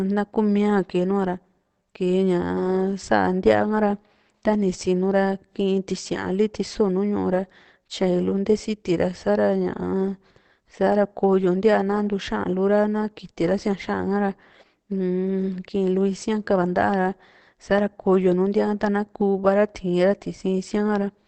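Throughout the speech, the sound is muffled and hoarse, with nothing above about 8.6 kHz. This is likely Opus compression in its speech (SILK) mode at a low rate, near 16 kbps. Unlike MP3, there is less swirl, and unlike a plain low-pass filter, the dulling comes with rasp.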